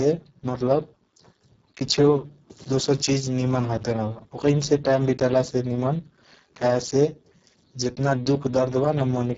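From start to finish the speech carries heavy Speex codec damage. Speex models the voice with a CELP predictor, and here it has very few bits left for the excitation signal. The sound fits a bitrate near 6 kbps. The result is a noisy, hoarse voice with a buzzy, near-robotic edge. Nothing reaches above 7.7 kHz. The band from 4 kHz up to that limit is thin, noise-like hiss rather than real detail.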